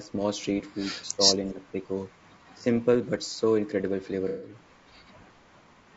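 Throughout, the speech sounds rough and grainy, with noise between harmonics and a thin, synthetic top band, plainly audible damage likely from low-delay AAC compression (AAC-ELD) at 32 kbps. The voice then dips by roughly 10 to 15 dB at 0.0 to 0.1 s, 1.14 to 1.23 s, 1.53 to 1.77 s and 2.56 to 2.66 s, likely speech suppressed in double talk, where the echo canceller turned the talker down along with the far side. From 4.28 to 4.55 s a smeared, noisy patch replaces the sound, AAC frame loss with concealment, where the decoder filled roughly 150 ms of missing audio from the last good spectrum.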